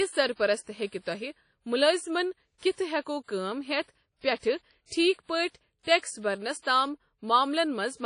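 Across the whole speech clip there's a ringing, washy quality with hiss that swells and fades with the voice, and nothing above about 10.1 kHz. That's likely WMA compression at a low bitrate, which fits something around 32 kbps.

Pre-echo shows up at 0.87–0.92 s, 2.58–2.63 s, 2.72–2.77 s, 4.37–4.43 s right after "كٲم ہیتھ", and 5.99–6.03 s just before "برنس تام". Each time, roughly 40–57 ms of hiss leaks ahead of a sharp onset, softening the attack.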